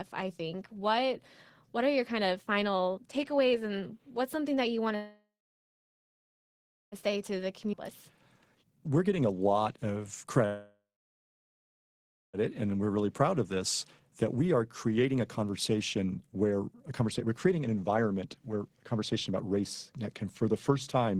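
Right after "something that you want", at 4.95 s, the sound stops, a brief fading buzz gives way to about 1.6 s of silence, and it resumes at 6.95 s with nothing lost. This is a call audio freeze, likely caused by delayed packets draining the jitter buffer; the receiver filled the wait (nearly 2 s) and carried on where it left off.

From 7.09 s to 10.25 s the speech runs hurried at unchanged pitch, about 122% of normal speed. This is a jitter buffer speed-up: with late audio piled up, the receiver repeatedly trimmed pitch-period-sized slices, removing roughly 0.7 s to reduce the delay.

Within that stretch, between 7.72 and 7.76 s, playback jumps forward almost seamlessly. This skip ahead drops roughly a second of audio outright, splicing the two sides with only a few milliseconds of fill, cutting the backlog at once.

At 10.46 s a second call audio freeze sets in: about 1.5 s of silence until 12.37 s, then the speech continues intact, again likely from a stalled packet stream emptying the buffer.

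A second jitter buffer speed-up follows from 12.47 s to 21.16 s, again at about 122%, with the delivery rushed but the pitch steady as roughly 2 s is trimmed away.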